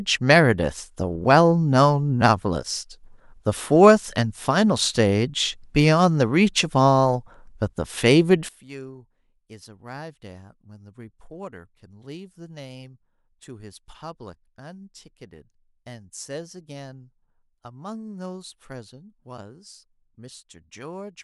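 From 8.49 s to the end, the speech drops by about 20 dB and turns faint. The centre of the sound seems to fall away. What remains is a faint trace. The likely cause is one channel inverted. One side of the stereo pair has flipped polarity. When both sides are summed to mono, their shared content cancels. Only the small difference between them survives.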